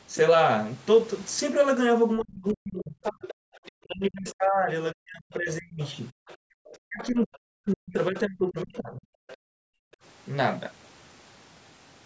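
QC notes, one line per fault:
2.2–9.04 s, speech suppressed in double talk: the talker's voice dips in pieces, by roughly 40 dB at worst and about four seconds in total, likely because the echo canceller turned both sides down. The talker goes missing here; nothing is added.
2.48–4.35 s, 5.82–7.38 s and 9.28–9.37 s, other side's voice leaking through: a second voice sits about 20 to 25 dB below the talker, likely loudspeaker echo the canceller failed to remove. This is extra sound, not lost sound.
6.12–6.6 s and 9.37–9.99 s, background gated by the echo canceller: the room sound drops by about 40 dB for roughly half a second each time, then returns. The background vanishes, not the talker.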